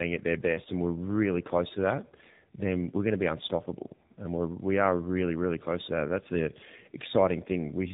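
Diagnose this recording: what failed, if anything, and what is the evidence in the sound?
Tandem speech coding, heard throughout the speech: the sound is rough, muffled and warbly, with nothing above 3.8 kHz. This points to two low-rate speech codecs in a row, likely G.723.1 then AMR-NB, with the second coder re-encoding the first one's already degraded output.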